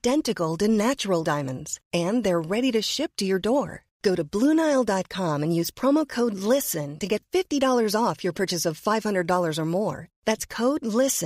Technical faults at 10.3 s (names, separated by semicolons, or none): none